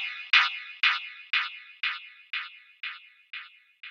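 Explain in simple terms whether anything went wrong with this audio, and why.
Nothing went wrong here; no faults can be heard.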